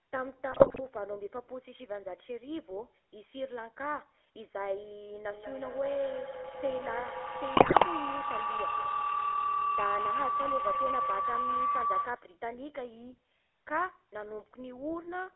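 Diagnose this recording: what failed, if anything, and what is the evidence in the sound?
At the codec stage, the GSM full-rate codec colours the whole recording. Nothing passes above 3.4 kHz or below about 300 Hz, and the speech has a buzzy, gravelly roughness, which fits 13 kbps full-rate coding. Plain band-limiting would sound dull but smooth.

GSM bit errors on the radio link cause squawks, pops and gargling at 0.52–0.81 s and again at 7.56–7.86 s. Corrupted filter, pitch and gain values distort the spectrum and level of individual frames. Lost packets would leave gaps or smeared repeats, not harsh bursts.

A feedback howl, an acoustic loop between two devices on the call, runs from 5.32 to 12.39 s. It settles on a tone near 1 kHz, pulses about five times a second and peaks about 4 dB above the speech. An ordinary echo would fade with each repeat, but this one grows.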